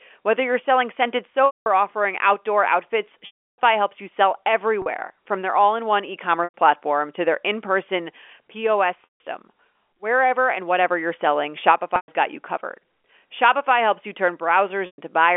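Packet loss with pitch repetition interrupts the speech at 1.46, 3.26, 4.82, 6.44, 9.04, 11.96 and 14.86 s, with gaps of 40 to 320 ms. The receiver loops the last pitch period. Short gaps sound like a buzzy hold, and longer ones fade to silence rather than cutting off abruptly.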